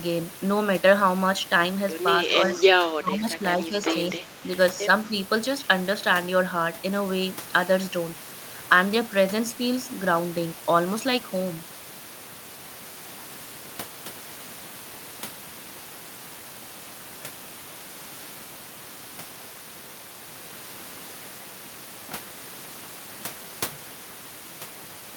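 At 2.52 s a faint delayed copy of the speech slips through for about a tenth of a second, to 2.63 s, trailing the original by 224 ms and sitting roughly 15 dB below it. That's an echo leak. The far end is likely on a loudspeaker, and its echo canceller missed a scrap of what its mic picked up and sent it back down the line.

Right after that come three dips where the speech gets pushed down: 2.95 to 3.76 s, the deepest at around 20 dB and about half a second affected in total; 4.13 to 4.5 s, around 10 dB; and a brief, mild sag of about 5 dB from 5.09 to 5.13 s. This is speech suppressed in double talk. It's likely both sides talking at once, with the canceller unable to tell the local talker from the echo and ducking everything.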